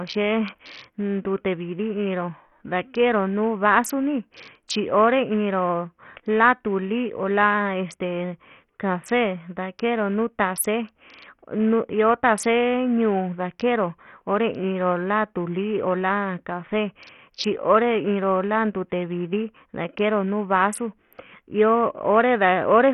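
From start to finish the speech sounds gritty and grainy, with treble that flickers in and out and nothing above 14.7 kHz. This is likely heavy Bluetooth SBC compression starving its upper sub-bands of bits, which fits a bitrate near 48 kbps.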